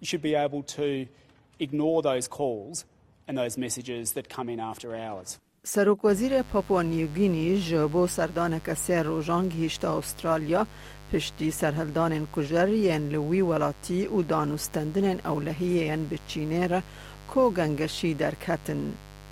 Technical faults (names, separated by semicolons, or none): mains buzz